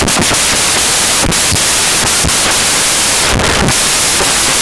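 A speech clip, but what actually comes through is a wall of loud, harsh broadband noise from start to finish, the classic sign of samples built from the wrong bytes. The reader is assembling each sample incorrectly, whether by being off by a byte, swapping byte order or assuming the wrong alignment, so the fast-flickering low bits end up as the big part of every value.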